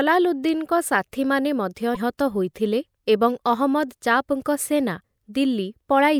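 At 1.92 s the speech is interrupted for about 40 ms by a short glitch, just before "ହୋଇଥିଲେ ଏବଂ", and a second, slightly shorter blip of about 35 ms follows at 5.01 s. Both come from damaged data in a compressed stream. Corrupted bytes reached the decoder, which misread those frames and lost sync until it found a valid frame header. The garbled output in between is heard as a brief chirp, squawk, click or short hole.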